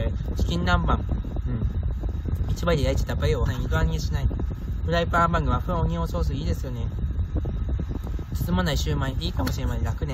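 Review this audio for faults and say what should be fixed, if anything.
At 3.45 s the sound jumps ahead with a small blip, likely a stream segment skipped: one chunk failed to load and playback carried on without it. Prefetch segments further ahead and retry failed ones before moving on.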